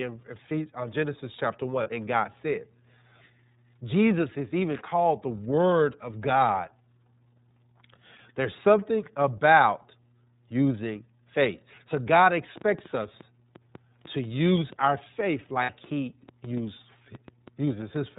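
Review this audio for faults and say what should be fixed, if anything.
The iLBC codec's damage is plainly audible throughout. It passes nothing above 4 kHz, and its frame-by-frame excitation coding gives the speech a rough, synthetic edge. The 13.33 kbps rate fits 30 ms frames. On a spectrogram, energy stops abruptly at 4 kHz with nothing above. To prevent it, use a wideband codec, or a higher-quality path, for this link.

There are lost iLBC frames at 1.83 s (30 ms, which fits one frame) and at 15.62 s (60 ms, consistent with two frames). The decoder fills each gap by repeating the last pitch cycle mixed with noise, heard as a held, buzzy or breathy vowel, and the speech recovers almost at once. On a waveform these show as repeated cycles, and on a spectrogram as flat, smeared harmonics. To prevent it, add jitter buffering or forward error correction on the network path.

A train of clicks runs from 12.26 s to 17.97 s. 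There are about 30 similar pops at irregular spacing, averaging 4.74 per second and about as loud as the speech. They are audible in pauses too. On a spectrogram they appear as thin vertical broadband lines, and on a waveform as isolated spikes. The likely cause is interference from nearby equipment or a faulty connection or power supply. To prevent it, check and reseat cabling, separate the equipment, and use a clean power source.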